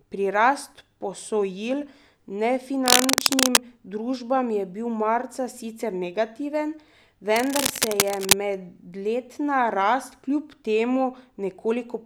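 From 2.86 to 3.58 s, a burst of cable scratch noise rides over the speech. It is dense, uneven scratching, about 5 dB louder than the speech. From 7.36 to 8.33 s it returns, this time at about the same level as the speech. The cause is likely a worn cable or connector being moved. Its contact resistance jumps rapidly, and those fluctuations pass into the signal as rustling crackle.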